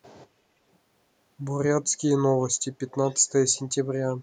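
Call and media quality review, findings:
Echo leak, 2.9–3.32 s and again briefly 3.54–3.61 s: faint delayed copy of the speech trailing the original by 356 ms, sitting well down, something like 30 dB under the main signal. Likely cause is the far end's acoustic echo canceller on a loudspeaker path letting residual mic pickup through, so a weak scrap of the sound comes back late. Worth checking that side's AEC.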